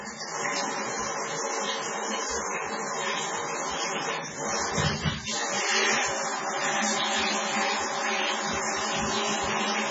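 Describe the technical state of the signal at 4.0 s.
At 4.0 s, as throughout, heavy MP3 compression is likely at work: nothing above 7.6 kHz, a flat ceiling on a spectrogram, with flickering holes that sound watery and swirly.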